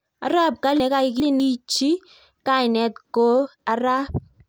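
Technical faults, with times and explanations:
0.8 to 1.4 s, chunks out of order: a 200 ms piece of speech arrives two chunks late and plays after the 400 ms meant to follow it. The passage sounds jumbled, with three hard joins. Unlike a dropout or repeat, nothing is missing or doubled.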